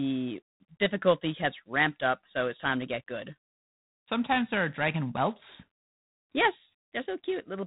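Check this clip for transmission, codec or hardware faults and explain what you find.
The speech has passed through G.726 ADPCM coding for its whole length. Each sample is sent as a few bits of error against an adaptive prediction, and with bits this coarse, fitting roughly 24 kbit/s, quantisation noise rides on the speech as a harsh, rasping hiss that swells with loudness. Nothing remains above 3.9 kHz.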